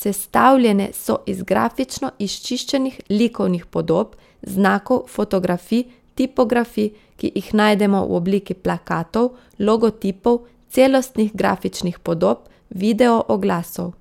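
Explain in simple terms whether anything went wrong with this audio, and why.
Nothing went wrong with this speech recording. No dropouts, glitches or other technical faults can be heard anywhere in it.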